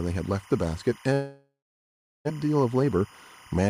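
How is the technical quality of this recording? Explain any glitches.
The recording has three technical faults: a constant interference tone, a long gap, and a brief hurried passage.

Timecode bleed runs through the whole clip. A chirping warble sits behind the speech at about 25 dB below it. It alternates between tones near 1 kHz and 2 kHz. The pattern repeats at 25 frames per second. Linear timecode is a square-wave signal. Here it has leaked from a neighbouring track or cable into the audio path.

A long network dropout occurs from 1.13 s to 2.29 s. The last sound is stretched into a fading buzz and hiss. After that, about 0.69 s of silence follows. When the speech returns, roughly 0.6 s is simply gone. The likely cause is that audio stopped arriving for a long stretch. The receiver covered the gap with filler. It never received the missing part.

A jitter buffer speed-up follows from 2.83 s to 3.12 s. 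The speech runs at about 114% of normal speed, but the pitch stays the same. It sounds rushed. The late audio appears to have arrived in a burst, overfilling the buffer. To cut that delay, the receiver removed tiny pitch-period slices, about 50 ms in total.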